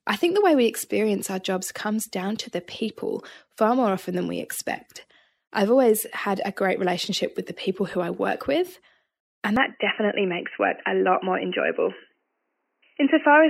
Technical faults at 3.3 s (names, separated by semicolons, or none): none